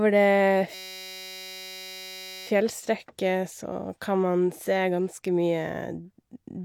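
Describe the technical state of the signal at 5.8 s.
At 5.8 s the speech signal is intact, with no dropout, clipping, glitch or other audible fault at that moment.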